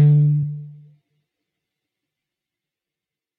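Damaged data in a compressed stream appears at 0.42 s as a single brief blip lasting about 14 ms. A short run of the encoded bytes there was corrupted, so the decoder could not read those frames correctly. It produced garbled output for an instant while it lost sync and hunted for the next valid frame header. Once it locked on again, the sound resumed. The result is a brief chirp, squawk, click or short hole cutting into the sound.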